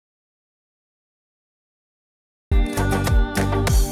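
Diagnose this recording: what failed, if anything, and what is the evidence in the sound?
Audio dropout to silence from the start to 2.52 s: dead silence without room tone, then sound cuts in. Likely an input link lost upstream.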